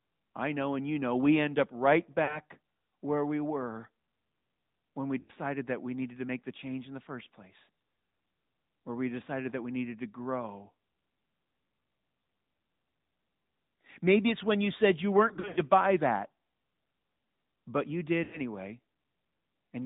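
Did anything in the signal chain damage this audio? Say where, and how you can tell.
Yes. The whole clip sounds buzzy and synthetic, with nothing above 4 kHz. That is plainly audible AMR narrowband mobile codec damage from the codec stage. The 10.2 kbps rate leaves too few pulses to model the voice cleanly.

Lost AMR speech frames, a network-stage fault, cause brief drawn-out warbles that fade at 2.24–2.39 s, at 5.20–5.31 s after "when we", and at 18.24–18.40 s after "but you". The worst is scattered dropouts from 15.28–15.62 s after "when you said you", before "buy that". The decoder bridged corrupted frames by repeating the last settings at falling gain, which fits gaps of roughly 40 to 80 ms.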